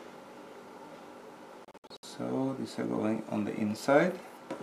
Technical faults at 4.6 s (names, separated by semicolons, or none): none